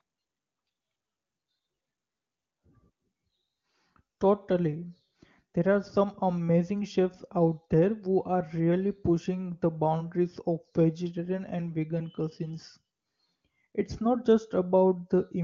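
Nothing stood out on listening to this recording, which comes through the wideband AMR (HD Voice) path.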